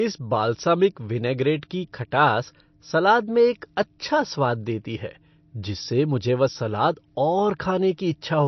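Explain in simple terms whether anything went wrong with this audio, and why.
Something did go wrong, and it lasts for the whole recording. The speech sounds dull and watery from start to finish. There is nothing above about 6 kHz, so the crisp top end of s sounds is gone. Quiet details flicker in and out, giving a swirly texture. The likely cause is heavy MP3 compression. The encoder had too few bits to spend, so it cut the treble and dropped weaker sounds.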